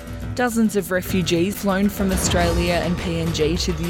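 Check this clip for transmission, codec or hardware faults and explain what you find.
One codec fault is present. From 1.50 to 1.55 s there is damaged data in a compressed stream: corrupted frames make the decoder lose sync, giving a brief glitch, rather than the smooth gap that packet-loss concealment leaves.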